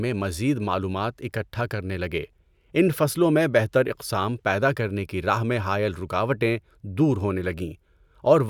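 No technical faults can be heard anywhere in the recording, and the signal holds steady throughout.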